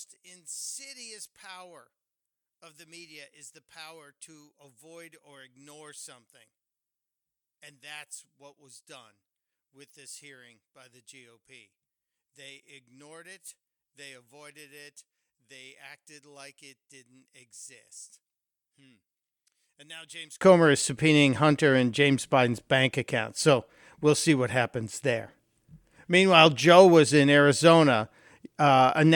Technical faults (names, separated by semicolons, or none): one channel inverted